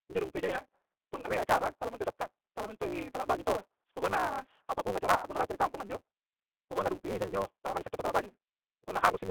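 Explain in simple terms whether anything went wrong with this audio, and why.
The speech sounds thin, slightly rough and synthetic, like a phone line carrying only about 200 Hz to 3.6 kHz. That comes from the G.729 codec, which rebuilds the voice from a simplified model.

A steady 188 Hz buzz runs throughout, and the speech plays about 1.88 times too fast. This is a block size mismatch (truncated). One stage sends longer chunks than the next reads, which fits a 256-sample read, so each chunk's end is dropped.

At 1.20 to 1.27 s, just before "rie acara tala minto", and again at 5.15 to 5.26 s, the voice smears and fades. This is VoIP packet loss concealed by the speech codec. When about 60 ms and then 160 ms of audio went missing, the decoder guessed at the gap by stretching the last sound.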